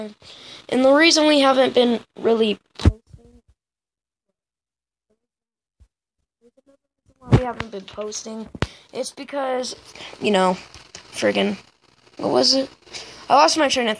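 Nothing stood out on listening; no problem could be heard at any point in the audio.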